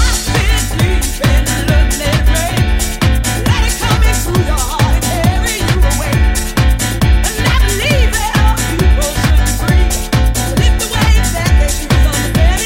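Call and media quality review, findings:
No transport, device or processing faults detected; the audio signal path checks out with no audible defects to report.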